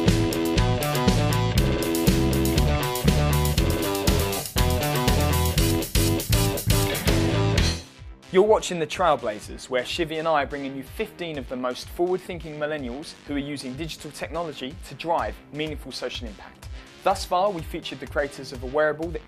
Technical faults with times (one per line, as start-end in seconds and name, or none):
none